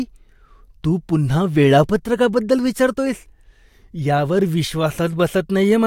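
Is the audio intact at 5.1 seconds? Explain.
Yes, at 5.1 seconds the speech runs intact, with no dropout, click, distortion or other fault audible at that moment.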